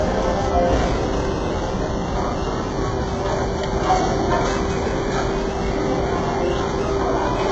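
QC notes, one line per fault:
throughout, HE-AAC compression: likely very low-bitrate HE-AAC coding, heavily damaged, with replicated treble ending near 7.9 kHz, leaving highs gritty, metallic and harmonically misaligned.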